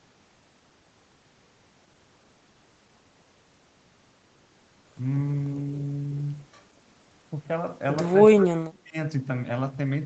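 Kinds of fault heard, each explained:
Speech suppressed in double talk, 8.19 to 8.96 s: the speech sinks by roughly 30 dB at its deepest and is affected for about 0.7 s in all. The likely cause is an echo canceller that, with both ends talking at once, could not tell this talker apart from the returning loudspeaker echo and so turned the whole signal down, taking the near-end voice with it until the overlap passed.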